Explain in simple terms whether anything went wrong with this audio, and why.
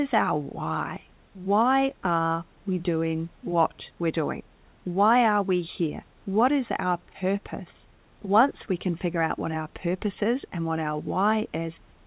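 Nothing went wrong with this audio, and there is no fault in it to explain.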